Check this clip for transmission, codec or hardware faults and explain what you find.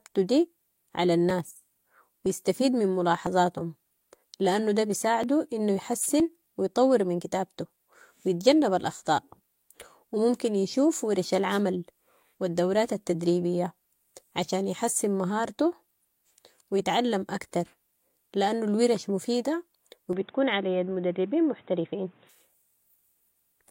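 The speech carries three kinds of fault: brief skips from overlapping stream segments, two wireless microphone noise hits, and a stretch that sounds like a switch to a poorer input device.

Overlap between stream segments occurs at 2.26–2.29 s, 3.27–3.30 s, 5.24–5.27 s after "لانهو دة", and 6.20–6.24 s before "ويطور من". Overlapping timestamps make the player discard about 30 to 40 ms of real sound. The waveform jumps, giving a click or tiny skip. The roughly one-second spacing fits one-second segments.

Wireless microphone noise hits occur at 6.02–6.07 s and 11.49–11.60 s. The FM radio link fades when reflections cancel. Receiver noise then rises over the signal. Each hit is a short swish of static, about 50 ms and 110 ms long.

Input switched to a poorer device fits 20.13–22.29 s, right after "الورش مفيدة و". The sound suddenly turns dull and boxy. Nothing above 3.8 kHz remains. There is no gap at the change and no clear level jump. 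A new background noise sits roughly 35 dB below the speech. The likely cause is the recording system changing to a narrower-band microphone or headset call profile.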